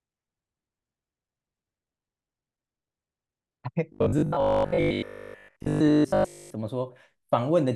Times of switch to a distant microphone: none

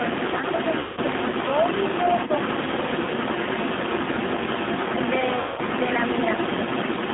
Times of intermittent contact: none

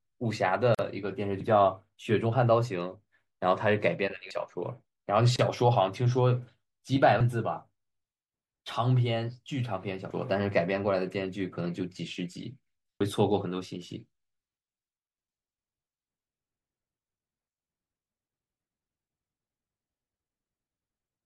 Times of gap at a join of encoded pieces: 0.75-0.79, 5.36-5.39

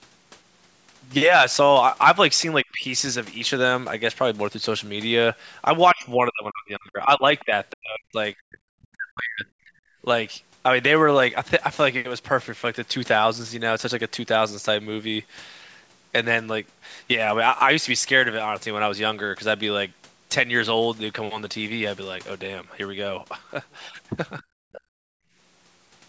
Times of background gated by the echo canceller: 24.81-25.35

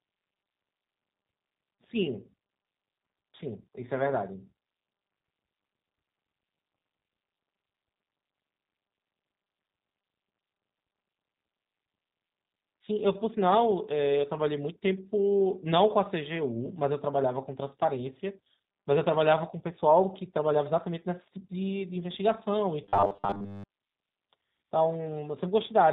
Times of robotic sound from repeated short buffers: 22.84-23.65

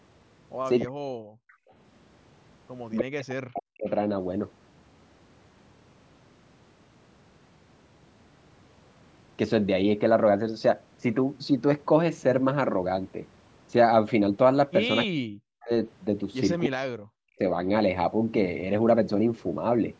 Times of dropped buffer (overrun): none

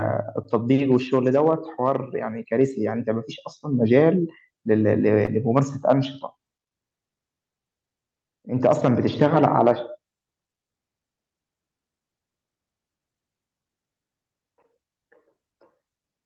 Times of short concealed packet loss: 5.25-5.29, 6.63-6.67

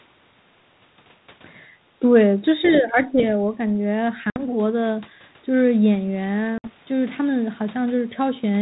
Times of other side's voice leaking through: 2.62-2.78

